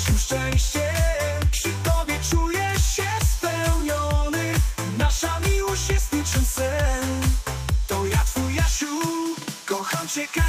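No technical faults can be heard in this recording.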